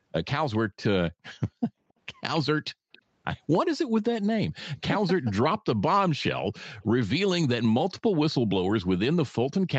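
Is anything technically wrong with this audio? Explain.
Yes, this speech has two technical faults.

Background gated by the echo canceller, 2.72 to 2.86 s: while the far-end loudspeaker played, the canceller clamped the microphone, pulling the room sound down by about 40 dB for roughly 150 ms. The background dips sharply, nearly vanishes, then returns as the suppression releases.

Echo leak, 2.92 to 2.99 s and 8.3 to 8.35 s: a faint copy of the speech returns 279 ms late, around 30 dB below the main level. It is heard as brief ghost fragments, likely residue the far side's echo canceller failed to remove from its microphone.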